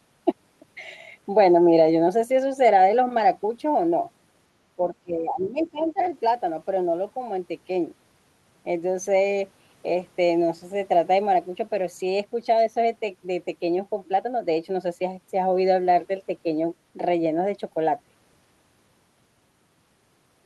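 From 4.76 to 6.0 s the speech is suppressed in double talk: level dips by roughly 15 dB, the waveform visibly shrinking, likely because the echo canceller clamped down while both sides spoke. From 5.84 to 6.05 s the other side's voice leaks through, a faint trace some 30 dB under the speech, seen as weak spectrogram energy, likely from residual loudspeaker echo.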